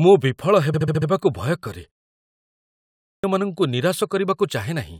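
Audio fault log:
0.73–1.08 s, repeated frames: a 70 ms chunk plays five extra times, giving a quick stutter just before "ଭୟ କରେ". The same compressed block, which fits three frames, got resent, stretching the audio by about 0.35 s.
2.60–3.24 s, clipped start after a pause: after a 0.77 s gap the output device seems to have dozed off and needed time to wake, so 0.64 s of the next phrase is swallowed and it jumps in abruptly, missing its opening.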